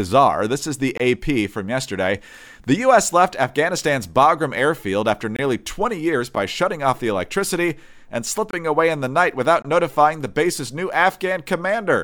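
Speech cut through by five abrupt dropouts at 0.98 to 1.00 s, 5.36 to 5.39 s, 6.35 s, 8.51 to 8.53 s and 9.62 to 9.65 s. These are blocks of digital silence: samples replaced by zeros with no fade. Four last about 23 ms, which fits a 1024-sample buffer the program failed to fill in time. The one at 6.35 s is shorter, about 9 ms, so it comes across as a tick or dip rather than a gap.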